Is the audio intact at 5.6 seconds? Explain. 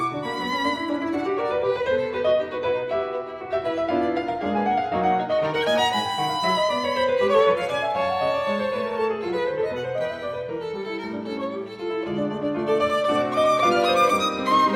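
Yes, the audio is intact at 5.6 seconds, with no dropout, click, distortion or other fault audible at that point.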